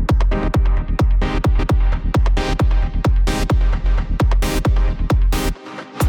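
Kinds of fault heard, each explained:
Overlapping chunks: around 1.59 s a 250 ms stretch plays twice where one 2-second chunk begins before the previous ends, heard as a brief stutter.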